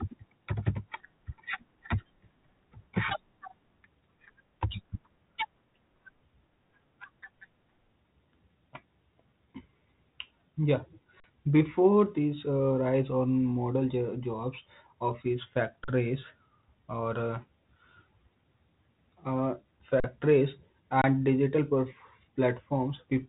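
At 11.20 to 11.24 s, 15.84 to 15.88 s just after "jobs office", 20.00 to 20.04 s and 21.02 to 21.04 s, the output buffer ran dry, an underrun with held sample, and the converter froze on its last value. The first three gaps last 40 ms and the last about 24 ms. Each one is a brief dead flat spot in the speech with little or no click on entry. Since playback picks up where it paused, the sound resumes softly, within a band that stops near 3.8 kHz from the G.726 coding.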